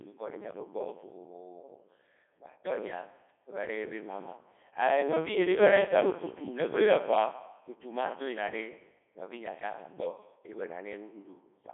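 Throughout, the speech sounds robotic and buzzy, squeezed into a band of roughly 300 Hz to 3.5 kHz with nothing above 3.8 kHz. This is the Codec 2 vocoder, consistent with its 3.2 kbit/s mode: only pitch, voicing, energy and spectral shape survive, and sine-wave resynthesis replaces the original waveform.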